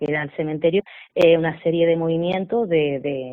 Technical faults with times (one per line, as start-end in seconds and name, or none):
0.79-0.81 skip ahead
1.19-1.96 jitter buffer speed-up